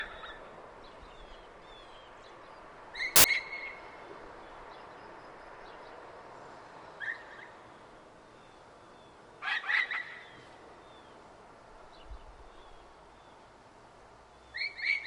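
At about 3.16 s, and lasting only until roughly 3.24 s, there's a burst of samples built from the wrong bytes. For those 80 milliseconds or so, the reader is assembling each sample out of misaligned or swapped bytes, so the jittery low-order bits end up driving the big part of every value. What you hear is a short, loud slap of harsh broadband noise before things snap back.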